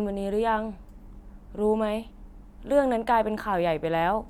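No technical faults can be heard anywhere in the recording.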